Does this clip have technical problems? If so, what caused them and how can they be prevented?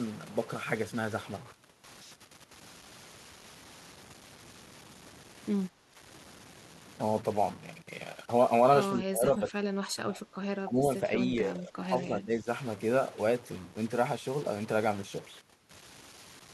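Yes. A distortion runs through the whole speech clip, and the pauses fill with noise. This is likely a stuck bit: one data bit held at a fixed value by a broken line or converter, offsetting samples by that bit's weight. Checking converter wiring and running bit-pattern tests would prevent it.

The speech dips by up to about 15 dB at 5.78–5.83 s and 8.95–10.22 s, and by about 10 dB at 10.65–10.85 s and 11.04–12.47 s. This is likely speech suppressed in double talk: the echo canceller mistook simultaneous talk for echo and attenuated it. Better double-talk detection would prevent it.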